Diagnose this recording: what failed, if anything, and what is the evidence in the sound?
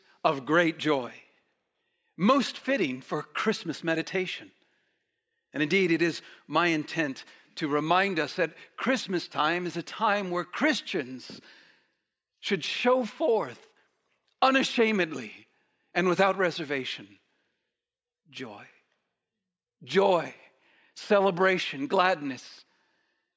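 Nothing failed here; I can't hear anything in this recording that points to trouble at any stage of the chain.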